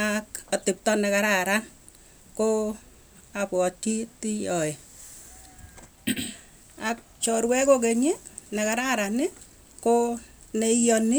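No technical faults can be heard anywhere in this recording of speech.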